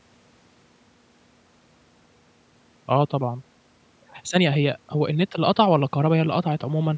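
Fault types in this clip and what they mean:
Nothing here counts as a fault: the speech just carries the usual call microphone processing, with the lowest bass trimmed off and nothing above 8 kHz, which is how that path normally sounds.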